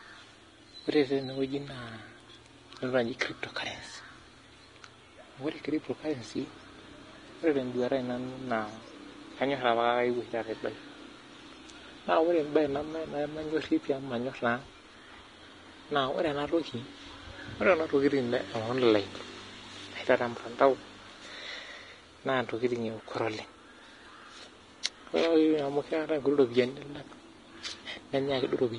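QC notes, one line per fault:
throughout: Vorbis compression, likely at roughly 31 kbps. Treble is coarsely quantised into hiss and grain, tones sound roughened, and attacks are blurred. The spectrogram shows a hard ceiling with nothing above 10.6 kHz, plus speckled, noisy high bands.
24.83–24.85 s: pre-echo. Quantisation noise meant for a sharp attack spreads about 26 ms ahead of it, so a short hiss leads in and the onset sounds smeared. The waveform shows a low, even noise floor before the transient, and the spectrogram shows a broadband smudge.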